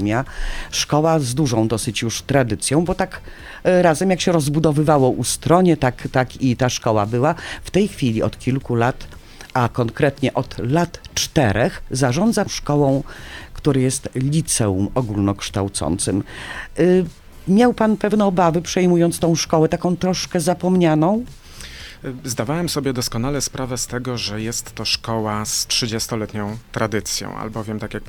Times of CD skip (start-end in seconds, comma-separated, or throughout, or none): 12.46